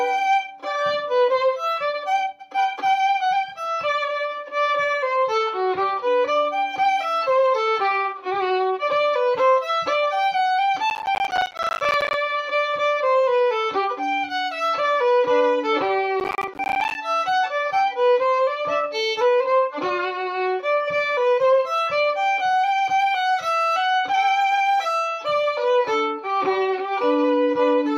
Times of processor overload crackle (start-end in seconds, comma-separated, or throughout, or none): 10.90-12.14, 16.20-16.95